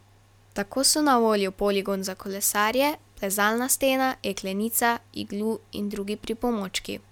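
Speech recording with no audible technical faults.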